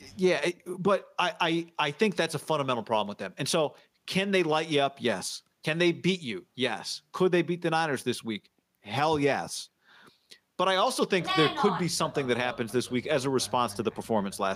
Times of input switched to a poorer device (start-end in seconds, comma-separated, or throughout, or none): none